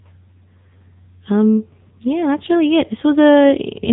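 From start to finish, the speech carries the AMR narrowband mobile codec sound, heavily damaged. Nothing above about 3.8 kHz survives, and the buzzy, synthetic quality fits a low bitrate near 6.7 kbps, where the vocal-tract model is fed too few pulses per frame. The voice sounds thin, like a 2G call. A spectrogram shows a flat ceiling near 3.8 kHz, with smeared harmonics in 20 ms blocks below it.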